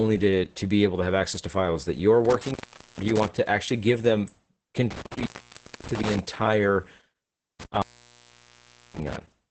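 Opus voice compression runs through the whole speech clip: the SILK linear-prediction coder is working in wideband mode with very few bits to spend, so the excitation is coded coarsely and the spectrum stops at about 8.8 kHz. The damage is heavy, which fits a bitrate near 10 kbps. The voice comes across muffled, hoarse and faintly robotic, with the top end gone.

An intermittent contact then breaks the signal path three times. The first is from 2.25 to 3.28 s, after "to files that you're" and before "to actually give them", and the line stays open for about 0.45 s. The second runs from 4.91 to 6.19 s with a 0.59 s gap. The last runs from 7.60 to 9.16 s, open for 1.12 s. Each time a loose connection breaks, the sound cuts out with crackle at the edges, and faint hiss fills the silence.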